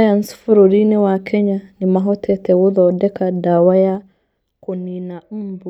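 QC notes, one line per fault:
3.87–4.24 s, zipper noise: a fast ticking rides on the speech as the level falls by roughly 15 dB. The gain drops in unsmoothed 2 dB steps at about twenty a second, and each abrupt jump leaves a small click.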